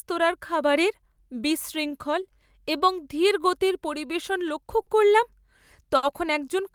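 Speech whose pacing sags and wobbles: from 0.60 to 4.68 s the delivery runs at 96% speed, with small, unevenly spaced hiccups that stretch the passage by roughly a fifth of a second. These are repeated timing corrections, where the receiver keeps repeating short slices to stay in step. They come from clock drift between sender and receiver, with the sender's clock running about 4% slow, so the jitter buffer keeps draining throughout. That drain also shows as two short stalls from a late packet, at 4.82 to 4.89 s and 5.97 to 6.05 s. In each, a sound is held unnaturally long, with a slight buzz or dip, for 50 ms and then 60 ms. The buffer ran empty while the receiver waited, so it stretched the last sound and resumed from the same point with nothing lost.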